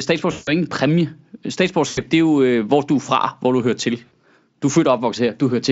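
Speech with three dropouts where the sound is smeared into a sustained, fading fill instead of continuing normally: 0.31 to 0.52 s, 1.87 to 2.02 s and 4.05 to 4.12 s. This is VoIP packet loss concealed by the speech codec. The missing stretches (160 ms, 100 ms and 60 ms, which fits runs of 20 ms frames) were filled by extrapolating the last pitch and spectral shape at falling gain. The Speex coding itself, at around 34 kbps, shows little damage.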